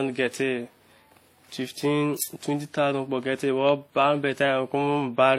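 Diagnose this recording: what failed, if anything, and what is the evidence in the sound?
The codec stage likely failed through transcoding between lossy codecs, with the speech passing through a WMA-style encoder and then HE-AAC at a low rate. The artefacts fit roughly 48 kbit/s followed by 32 kbit/s. Throughout the clip, nothing sounds above 16.2 kHz. The second encoder spends its scarce bits reproducing the first one's artefacts, then adds its own, so two different textures of distortion sit on top of each other across the speech.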